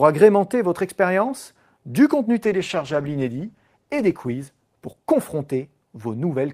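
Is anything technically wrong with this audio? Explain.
Yes, there's a call bitrate drop from 2.45 to 6.01 s, right after "votre expérience du contenu". The speech turns coarse and muffled, with the highs shaved off as the encoder starves, which fits a fall from 48 to 14 kbps, bottoming out for about 1.5 s.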